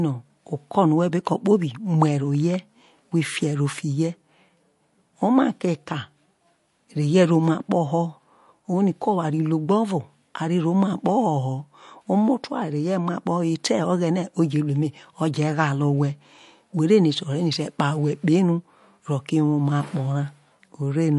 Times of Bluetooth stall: none

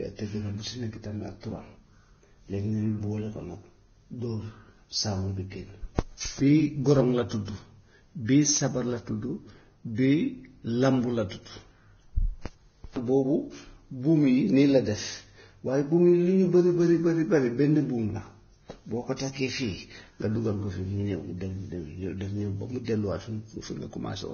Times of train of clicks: none

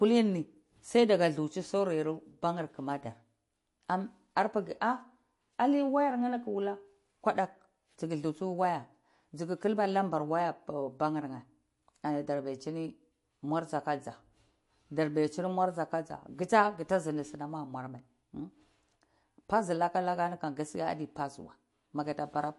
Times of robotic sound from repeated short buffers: none

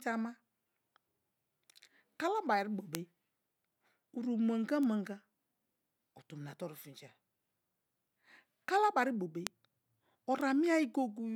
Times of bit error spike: 2.95, 4.83, 9.47, 10.41

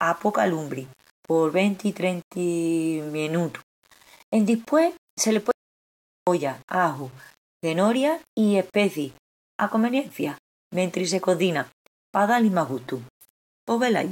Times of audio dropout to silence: 5.51-6.27

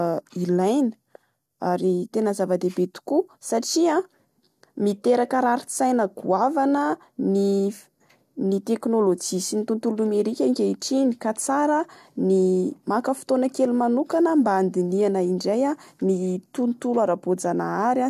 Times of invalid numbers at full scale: none

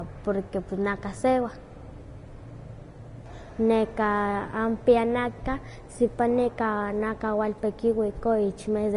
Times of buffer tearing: none

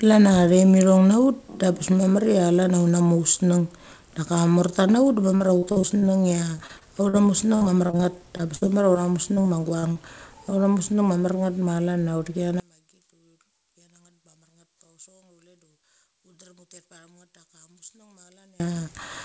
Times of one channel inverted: 12.60-18.60

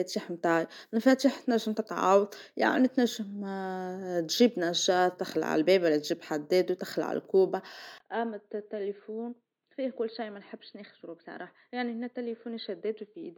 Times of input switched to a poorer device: 7.98-13.37

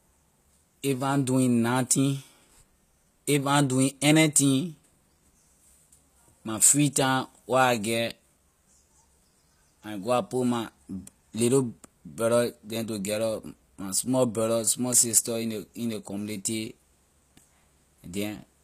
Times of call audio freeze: none

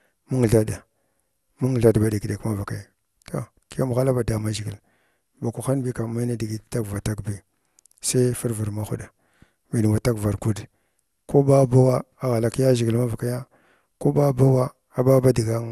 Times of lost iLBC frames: none

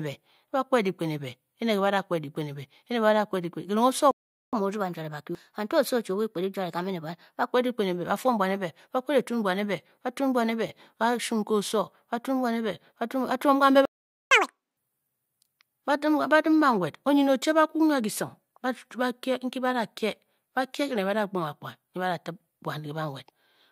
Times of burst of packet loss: none

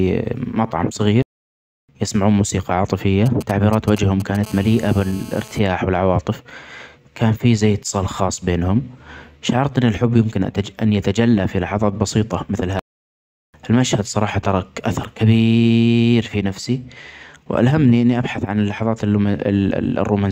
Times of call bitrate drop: none

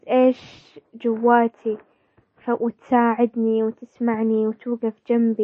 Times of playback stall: none

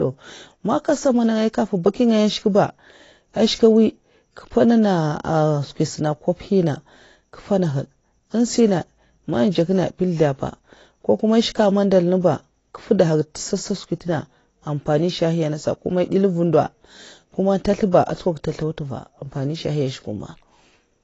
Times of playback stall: none

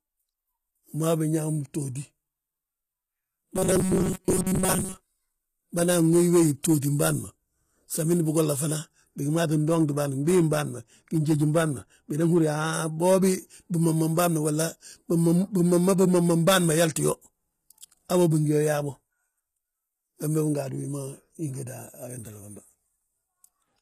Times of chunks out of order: none

